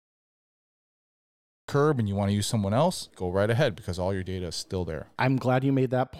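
The recording began late, a cut-off start: silence runs to 1.68 s, then speech bursts in mid-phrase at "and you want to", with no natural attack.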